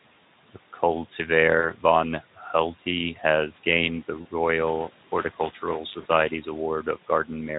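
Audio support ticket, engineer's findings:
Three brief dropouts in the speech, at 1.59–1.73 s, 4.21–4.27 s and 6.01–6.08 s. VoIP packet loss concealed by the speech codec. Each gap is about 40 ms, which fits two 20 ms frames. The decoder extends its last pitch and filter and lowers the gain, so the sound blurs into a short buzzy or noisy, fading tail. Speech stays weak briefly after packets resume. The light Speex coding and the room noise, about 22 dB under the speech, are not part of the fault.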